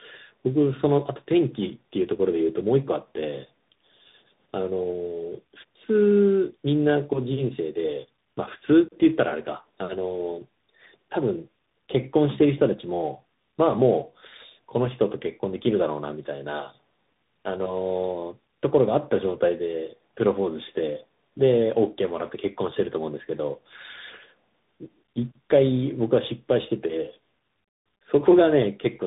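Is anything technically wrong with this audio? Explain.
Yes. Tandem speech coding runs throughout: the speech sounds passed through about three speech codecs in series, likely G.726, AMR-NB and finally CVSD, each re-encoding the last one's damage. It sounds rough, muffled and warbly. A spectrogram shows nothing above 3.8 kHz and smeared, broken harmonics.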